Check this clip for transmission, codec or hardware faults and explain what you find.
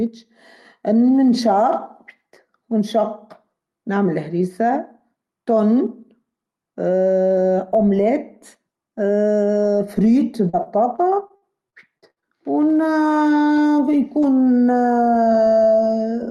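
One transmission fault is present. Repeated packet loss (robotic sound) runs from 10.49 to 12.24 s: ten short dropouts, the longest 61 ms, each patched by stretching the previous sound, giving choppy speech. The call codec path limits the highs to about 12 kHz.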